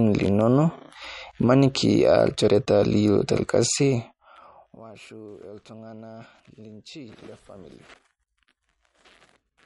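All the way through, the speech has MP3 compression damage, likely from a low bitrate around 50 kbps: nothing above 11.1 kHz, with watery, swirly sibilants and smeared attacks.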